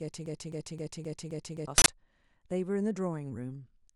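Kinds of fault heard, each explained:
Broken-record loop: From the very first moment until about 1.68 s, one 262 ms fragment plays five times back to back with no variation, so the audio is already stuck when the clip begins. The likely cause is a stalled player or stream that kept resending its last fragment, and whatever should have sounded then is gone. Unlike an echo or reverb tail, nothing decays or overlaps; each repeat is an identical, full-level copy.
Uninitialised buffer: At 1.78 s an 80 ms block of harsh, loud digital noise cuts in and stops abruptly at 1.86 s. It comes from a buffer being played out before any audio was written into it, so leftover memory contents were turned into samples. Unlike a click or a clipped peak, it is not a brief spike or a squared-off distortion of the real sound but a solid burst of unrelated noise lasting one whole block.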